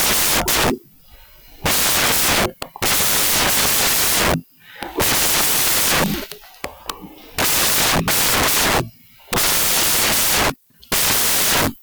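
From the first moment to the end, the speech is heard as loud, harsh broadband noise, the sound of samples built from the wrong bytes. The reader assembles each sample with its bytes misplaced, whether offset by one, swapped in order or misaligned, so the rapidly changing low-order bits land in the most significant position. Each value becomes essentially random.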